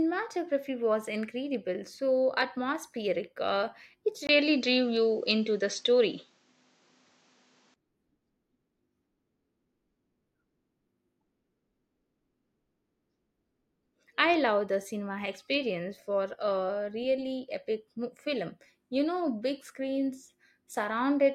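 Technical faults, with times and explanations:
4.27 to 7.76 s, input switched to a poorer device: the speech abruptly loses everything above 8.1 kHz and turns duller, with a 20 ms gap at 4.27 s, a level shift of about 5 dB, and a new noise floor roughly 40 dB under the speech. The full band returns at 7.76 s. The likely cause is a switch to a narrower-band microphone and back. A spectrogram shows the top band empty across that span, and the waveform shows the brief dropout and a step in amplitude.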